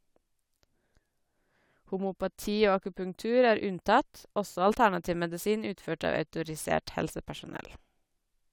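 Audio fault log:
No faults can be heard in this speech recording. Nothing in it calls for an entry in this log.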